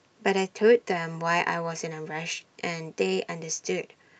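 Listening to the speech recording, nothing stood out as a technical problem at any point.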